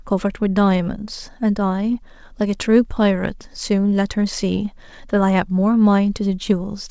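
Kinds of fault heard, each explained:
Clock drift between sender and receiver: the sending end's clock runs fast, by around 4 percent, so audio arrives quicker than the receiver plays it out. The jitter buffer keeps overfilling, and you get small timing hiccups at uneven gaps right through the speech.
Repeated timing corrections: to keep pace, the receiver keeps trimming short bits out, always in the same direction, from 0.02 s to 6.87 s, which nets out at 104 percent speed. Each cut is tiny, heard, if at all, as a slightly rushed, unsteady tempo.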